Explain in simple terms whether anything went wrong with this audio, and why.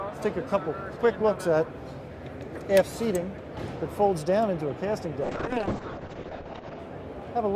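From 5.28 to 6.85 s the sound turns rough and muffled, as if the top end were cut off. This is a call bitrate drop: the connection got worse, so the audio was squeezed into far less data, dropping detail and the sound above 8 kHz.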